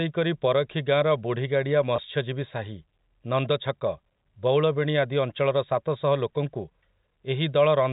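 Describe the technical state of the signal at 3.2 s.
At 3.2 s the speech is intact, carried by ordinary G.711 telephone coding with its usual 4 kHz ceiling and faint level-following quantisation hiss, and no fault at that moment.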